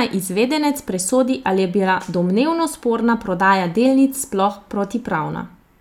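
No technical faults can be heard in this speech recording at any point in its duration.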